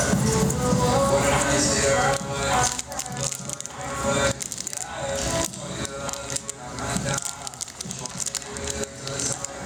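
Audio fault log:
Throughout, gain pumping: the level keeps swinging something like 20 dB. That's likely the input gain set way too hot, with a fast limiter or compressor clamping down on every peak and squashing the dynamics.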